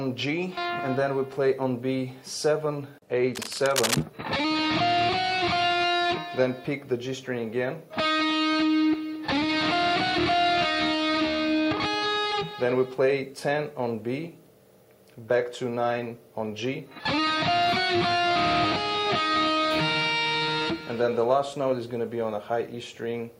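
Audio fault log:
3.33–4.04 s, cable scratch noise: for about 0.7 s a dense, uneven scratching and rustling sits over the sound, ragged rather than steady, and nearly as loud as the material itself, only about 5 dB beneath it. The likely cause is a worn cable, connector or control being moved, so its contact resistance jumps around rapidly and injects irregular bursts of noise into the signal path until the movement stops.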